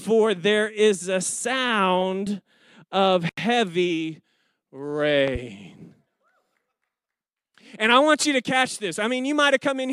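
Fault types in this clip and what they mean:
Loud pop: two sharp pops between 5.28 and 5.38 s, about 10 dB above the speech, likely from a voltage spike in the signal chain.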